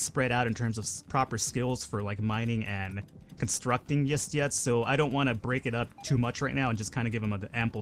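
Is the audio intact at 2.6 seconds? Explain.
Yes, the audio is intact at 2.6 seconds, with no fault at that moment.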